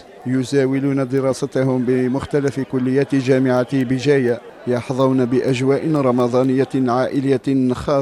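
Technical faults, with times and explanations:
0.22 to 7.88 s, word clock ticks: around thirty sharp ticks of uneven strength, about every fifth of a second. The receiver's clock drifts against the sender's, which fits roughly a hundred parts per million, and a single sample slips at each crossing. A spectrogram shows thin full-height vertical lines. The waveform shows tiny steps.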